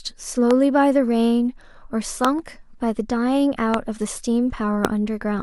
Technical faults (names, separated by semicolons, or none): loud pop